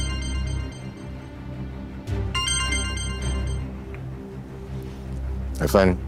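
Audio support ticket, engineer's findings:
No faults found on listening; nothing audible to chase in this one, so the ticket can be closed from the audio side.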